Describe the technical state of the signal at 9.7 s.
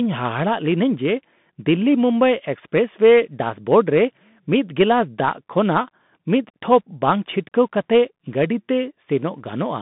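At 9.7 s you're still hearing the Bluetooth CVSD headset codec, which runs through the whole clip. Speech sits in a narrow 150 Hz to 3.6 kHz line band with nothing above 3.8 kHz. One-bit up/down coding, consistent with a 64 kbps stream, leaves plainly audible scratchy sibilants and grainy hiss.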